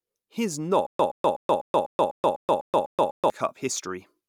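From 0.87 s to 3.3 s the speech breaks into a stutter with silent gaps: a 122 ms fragment plays, then about 127 ms of dead digital silence, and the same fragment returns ten times on a steady 249 ms cycle. That likely points to a stalled player or stream replaying its last buffer at each retry. Unlike ordinary dropouts, the gaps alternate with identical repeats rather than fresh audio, and the speech that belonged there is lost.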